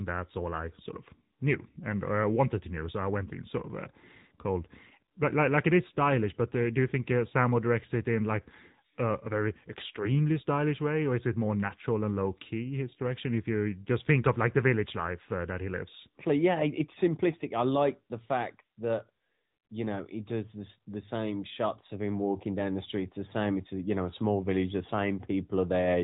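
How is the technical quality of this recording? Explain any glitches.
The recording has clearly audible codec damage from start to finish. Throughout, the speech passes through the AMR narrowband mobile codec, the coding used on 2G and 3G calls. Nothing above about 3.8 kHz survives, so the sound is muffled and boxy. The codec rebuilds the voice from a vocal-tract model excited by a few pulses per subframe. At this rate, the damage is plainly audible. The voice takes on a buzzy, synthetic edge. The degree of damage fits a high-rate mode of about 10.2 kbps.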